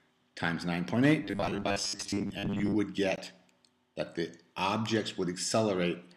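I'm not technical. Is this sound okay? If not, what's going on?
No. From 1.23 to 2.75 s there is robotic sound from repeated short buffers. Fresh audio was likely arriving too slowly, so the playback kept re-using its last tiny slice, about a hundredth of a second long, in place of the missing material. Roughly half of that stretch is repeats. Because the same slice loops 100 times a second, the sound takes on a stiff, metallic 100 Hz buzz that only loosely tracks what it should be.

At 3.16 s there is a gap between stream segments. The audio arrives in chunks, and the timing of two neighbouring chunks left a small space between them, about 17.7 milliseconds. The player filled that space with silence. You hear it as a brief, sharp dropout with abrupt edges, like a tiny click of nothing. No sound is actually lost there; the silence is extra time inserted into the audio.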